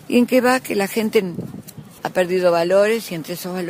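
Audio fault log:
No faults found; the signal holds continuous timing across the whole clip, with no interruptions or disturbances.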